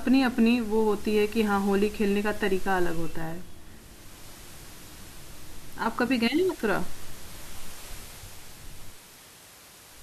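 No technical faults are audible.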